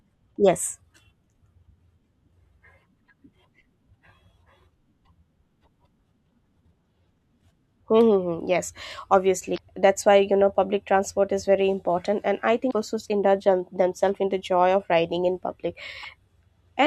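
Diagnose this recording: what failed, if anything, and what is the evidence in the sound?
The failure is in the codec stage: damaged data in a compressed stream. Five brief glitches cut through the speech at 0.33–0.37, 6.28–6.30, 9.54–9.59, 12.69–12.73 (just before "just indulge") and 16.00–16.05 s, each lasting only about 25 to 50 ms. Corrupted bytes make the decoder misread those frames and hunt for the next valid header. The result is a chirp, squawk, click or short hole as sync is lost and regained.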